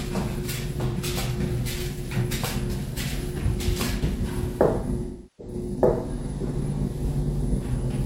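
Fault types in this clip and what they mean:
AAC frame loss with concealment: missing codec frames are patched by the decoder from the last good spectrum. Near 0.86 s a brief 85 ms smear, fitting two frames, shows as blurred spectrogram texture. From 5.05 to 5.54 s, fitting eight frames, the waveform envelope sags and recovers.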